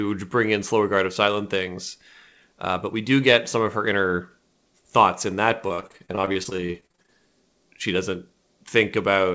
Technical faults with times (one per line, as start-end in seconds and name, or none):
5.68-7.10 repeated packet loss (robotic sound)